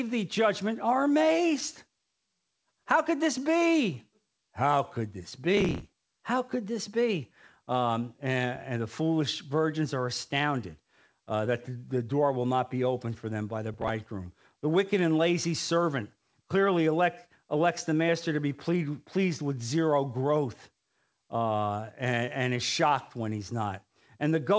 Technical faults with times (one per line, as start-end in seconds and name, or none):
5.57-6.08 processor overload crackle
13.74-14.06 processor overload crackle